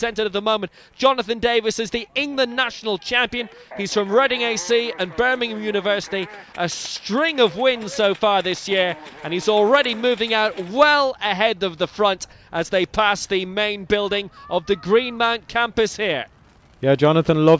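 No technical faults can be heard anywhere in the recording. There are no breaks, clicks, dropouts or level jumps at any point.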